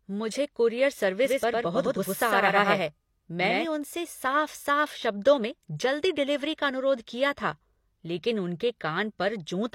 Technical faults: doubled audio track

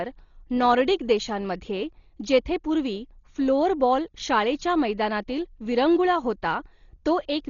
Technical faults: Dolby Digital compression

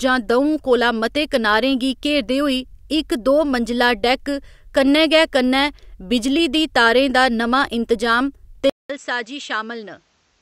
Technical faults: input switched to a poorer device

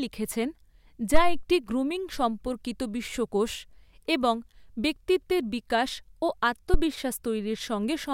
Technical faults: phantom power thump

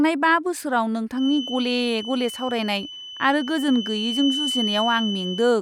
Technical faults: feedback whistle

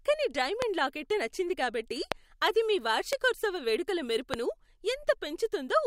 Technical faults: loud pop

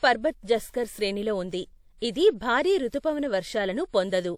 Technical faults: pre-echo

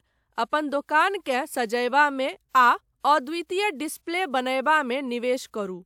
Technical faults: none

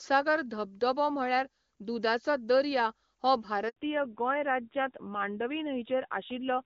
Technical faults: handover gap; fallback to narrowband

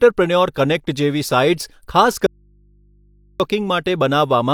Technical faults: audio dropout to a faint residue

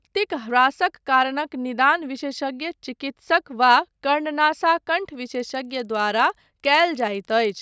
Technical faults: resampler restarted on every block

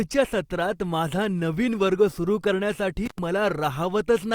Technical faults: intermittent contact

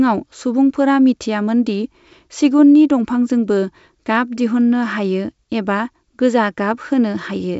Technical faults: none

